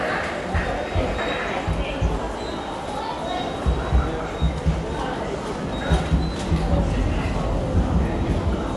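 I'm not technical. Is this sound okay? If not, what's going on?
No. From start to finish the sound is dull and muffled, as if heard through a cloth, with nothing at all above about 11.4 kHz, so the crisp top end is missing. Steady tones also carry a rough, fluttering hiss around them. This is most likely Dolby Digital compression squeezed too hard. To save space, the encoder dropped the highest frequencies and stored much of the rest so coarsely that the playback side fills the gaps with noise.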